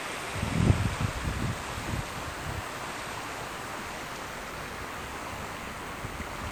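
From start to finish, a DECT cordless phone buzz runs under these everyday sounds: a steady, thin, harmonic-rich tone at 100 Hz, sitting roughly 20 dB below the wanted sound. A nearby DECT handset or base transmits a radio burst every 10 ms, which the audio circuitry rectifies into this buzz.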